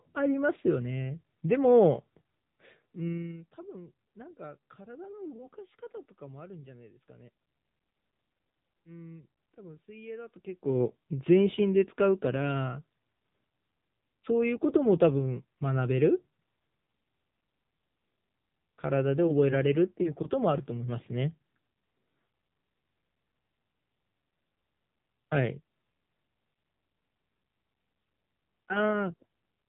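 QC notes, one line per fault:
throughout, AMR narrowband mobile codec: the speech sounds buzzy, synthetic and dull, with plainly audible coding damage and nothing above 3.8 kHz. The voice is rebuilt from a vocal-tract model fed by sparse pulses, and the coarseness points to a low rate near 8 kbps.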